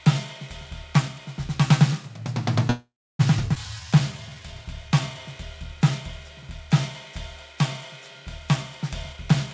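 At 2.70 s the music halts in a call audio freeze lasting until 3.21 s. A fading tail of the last sound gives way to about 0.3 s of silence, likely because packets were held up and the jitter buffer ran dry. About 0.49 s is inserted and nothing is lost, so the music resumes exactly where it stopped, unlike a skip.

From 3.55 to 3.57 s comes a skip ahead. About 0.2 s of music is dropped and the two sides are butted together with almost no gap. There is no pause at all, only a sudden jump forward, which is the reverse of the freeze just before it.

A jitter buffer slow-down runs from 3.80 to 5.20 s. The receiver repeats tiny pitch-period slices to rebuild its reserve, adding 179 ms, so playback drops to 88% speed. Pitch stays put while sustained sounds drag. No silence is inserted, which is what separates it from a freeze.

From 9.12 s to the end at 9.54 s, a jitter buffer speed-up trims short pitch-period pieces to shed excess delay. 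Roughly 0.1 s is removed, and playback runs at 127% speed with unchanged pitch, so the tempo rushes. The cuts are spread thinly rather than made in one jump, which distinguishes it from a skip.

The G.722 call path leaves nothing above 8 kHz.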